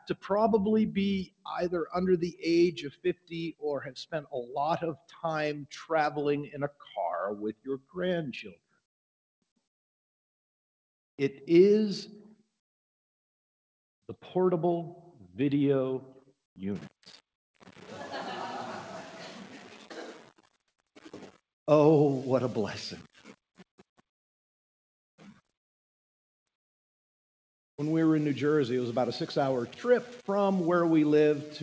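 Noise suppressor applied to music or sounds, throughout: a suppressor tuned for voices was left running, so it treats sustained tones, ambience and reverberant tails as noise to be removed. Onsets pass largely intact, but anything held or decaying is pulled down, and the level swings by around 10 dB as the suppressor clamps and releases. The result is a pumping, fluttering quality with thinned-out tails. The sound also stops dead above 8 kHz, consistent with a 64 kbps G.722 call path.

Comfort noise in place of the background, 20.68 to 20.78 s: for about 100 ms the quiet background, sitting about 67 dB below the loudest passages, gives way to a smooth, featureless hiss, shifting in level by about 12 dB before the real ambience returns. The likely cause is discontinuous transmission. The sender stopped sending during what its detector judged a pause, and the receiver filled the gap with synthetic noise roughly matched to the background's spectrum.

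Sound cut by the noise suppressor, 25.18 to 25.51 s: across roughly 300 ms the suppressor misjudged this sound as noise and attenuated it far more than its surroundings, with the deepest drop reaching about 21 dB. Sustained and decaying energy takes the brunt, so the sound sinks in level or its tail is cut short rather than dying away naturally.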